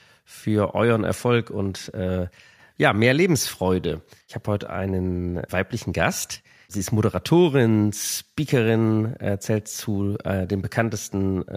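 No technical faults are audible.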